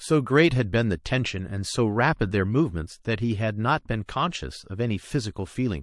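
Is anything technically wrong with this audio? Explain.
Yes. Throughout the speech, the sound is watery and swirly, with dull treble and metallic, chirpy s sounds. This is likely MP3 compression at a low bitrate, around 48 kbps. Short of bits, the encoder cuts the top frequencies and drops weak components that flicker between frames.

At 4.06 s there is pre-echo. A hiss rises by about 19 dB and runs 29 ms before a sharp attack. The codec spreads its noise across a long block, roughly 48 ms, without switching to shorter blocks. So the attack sounds softened.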